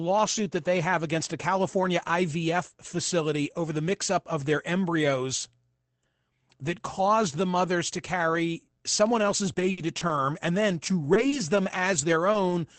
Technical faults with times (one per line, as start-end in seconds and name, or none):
9.53-12.52 scattered short gaps